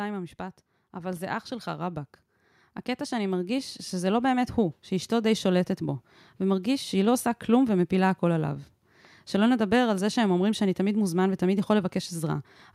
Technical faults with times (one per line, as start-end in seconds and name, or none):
0.36-2.06 automatic gain rising
3.08-5.20 automatic gain rising